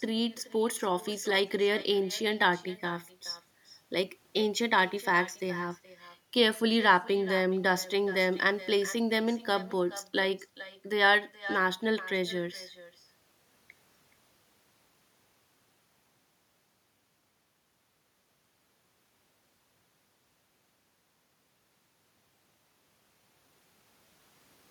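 From start to finish the speech carries an echo with no canceller. At the far end the call plays through a loudspeaker. The microphone there picks it up again, and nothing strips it out. So every phrase returns after the network round trip, about 0.4 seconds later. The copy sits about 17 dB below the original. It sounds quieter and thinner, a faint shadow trailing each phrase.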